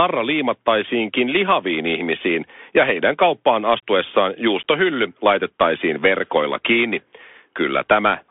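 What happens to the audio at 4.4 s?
At 4.4 s you're still hearing the Bluetooth CVSD headset codec, which runs the whole clip. It codes one up-or-down bit per sample, fitting a 64 kbit/s stream, so the speech sits in a 250 Hz to 3.5 kHz band, nothing above 3.7 kHz, with scratchy sibilants and granular hiss underneath.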